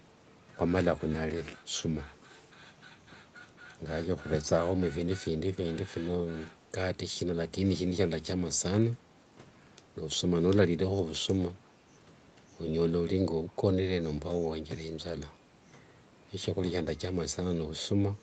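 At 13.48 to 13.52 s a very faint scrap of delayed speech surfaces, repeating sound from 340 ms earlier far below the speech level. This echo leak likely comes from one side's canceller missing loudspeaker pickup. A spectrogram shows a weak ghost of earlier harmonics, too small to see in the waveform.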